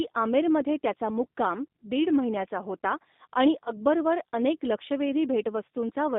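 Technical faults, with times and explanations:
Throughout: G.729 codec at 8 kbit/s, line band about 200 Hz to 3.7 kHz; spectrogram shows nothing above 3.7 kHz, and speech sounds plainly rough and synthetic from sparse-pulse modelling.
3.65–3.72 s: VoIP packet loss concealed by the speech codec, one 20 ms packet lost; decoder extrapolates pitch and filter into a fading buzzy tone or coloured noise, seen as smeared harmonics and a dipping waveform envelope before speech fully recovers.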